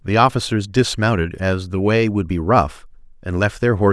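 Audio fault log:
Nothing stood out on listening to this speech recording.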